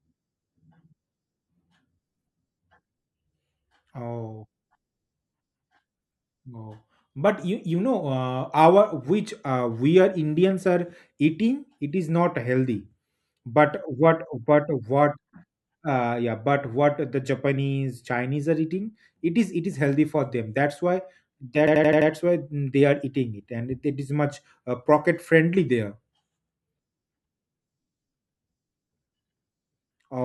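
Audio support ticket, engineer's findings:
System hang loop, 21.68–22.10 s: an 85 ms fragment repeats five times as an 11.7 Hz stutter. Host or driver froze while the hardware cycled its ring buffer, which fits a 4096-sample buffer.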